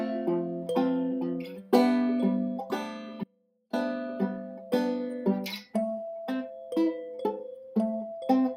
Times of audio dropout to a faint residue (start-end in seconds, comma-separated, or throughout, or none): 3.24-3.73